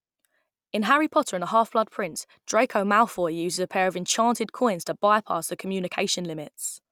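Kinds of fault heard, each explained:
No faults heard.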